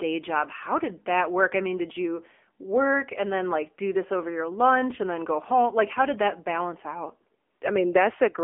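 From start to finish the speech sounds thin, boxed-in and buzzy, with a plainly audible synthetic edge. The lows below roughly 250 Hz are gone, and nothing reaches past about 3.5 kHz, so sibilants lose their hiss. This is the AMR narrowband mobile codec. AMR-NB rebuilds the voice from a vocal-tract model fed by sparse pulses in short sub-frames. The coarse, buzzy texture points to one of its lower modes, around 8 kbps.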